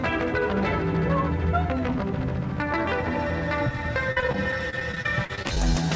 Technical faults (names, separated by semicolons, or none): repeated packet loss (robotic sound)